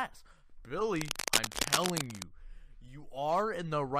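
From 0.91 s to 2.25 s, dense, uneven scratching and rustling sits over the sound at roughly the same loudness as the sound itself. This is cable scratch noise, likely from a worn cable, connector or control being moved, making its contact resistance jump about rapidly.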